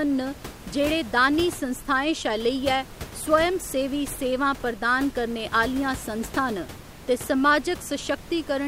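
Nothing stood out on listening to this speech recording, and the background noise of the room sits at about 16 dB below the speech.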